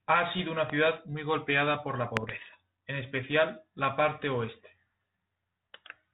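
Bit errors on an ADPCM link hit at 0.34 to 0.42 s and at 2.15 to 2.56 s, between "muy golpeada por la" and "en especial". Roughly 0.5 and 0.4 percent of bits flip, knocking the decoder's step size and predictor askew, so pops and rough, level-jumping bursts ring on over the band-limited, lightly coded telephone path.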